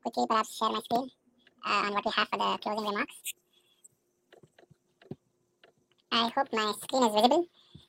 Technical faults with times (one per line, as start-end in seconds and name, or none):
0.00-7.88 wrong sample rate